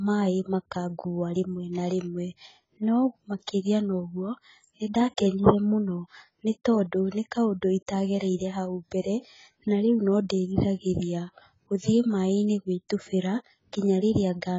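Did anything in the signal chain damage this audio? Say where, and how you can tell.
Yes, at the codec stage, throughout the speech. Nothing survives above 7.6 kHz, so sibilants sound dull and clipped off, and the heavily damaged upper bands have a warbling, fizzy texture instead of clean detail. This is likely AAC compression at a very low rate, which fits a bitrate around 16 kbps: the encoder lowers its cut-off and quantises the remaining frequency lines so coarsely that bands drop out or smear from frame to frame.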